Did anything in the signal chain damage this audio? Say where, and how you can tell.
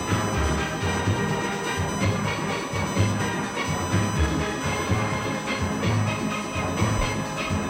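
Yes. A USB whine has leaked into the analogue wiring. The bus draws current in 1 ms frames, and that pulsing load has coupled in through the shared power or ground, so a fixed 1 kHz tone sits under the sound from start to finish. It is strongest at 1 kHz itself and sits roughly 15 dB below the wanted signal, loud enough to hear as a steady, thin whine that never changes pitch.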